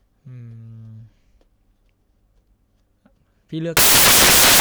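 From 3.77 s to the end at 4.60 s the speech collapses into loud, harsh broadband noise: samples built from the wrong bytes, with the fast-changing low bits read as the large part of each value. Unlike added hiss, it comes from misread samples rather than noise laid over the speech.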